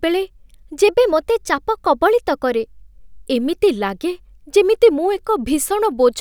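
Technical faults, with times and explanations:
0.88 to 2.53 s, drift correction step: speech runs 5.4% fast and 91 cents sharp, then snaps back, likely a clock-sync rate step rebalancing its buffer.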